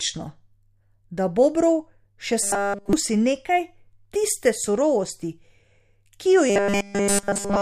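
At 2.43 to 2.93 s and again from 6.50 s to the end, the speech collapses into a rigid metallic buzz at 200 Hz, robotic sound from repeated short buffers, likely from a roughly 5 ms block being looped while nearly all the real audio is skipped.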